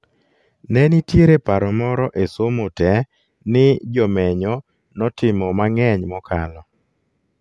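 No technical faults can be heard in the speech at any point. There is nothing to place on a timeline.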